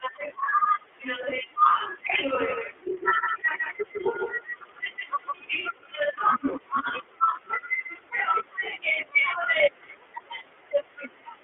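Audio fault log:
Throughout: iLBC codec. The speech is confined to a narrow telephone band, with nothing above roughly 3.4 kHz and little below 300 Hz. It sounds clear but rough and slightly synthetic. Each 30 ms frame is coded on its own, and the texture points to the 13.33 kbps mode. The coding damage is plainly audible.
2.40 to 5.60 s: doubled audio track. A second copy of the speech runs about 150 ms behind the first. It sits a few decibels quieter, around 5 dB down. The copy carries no reverb tail or room colour, so it reads as a flat slapback rather than an echo. It starts and stops abruptly at those times. This is likely caused by the signal being captured twice, once through a slower path.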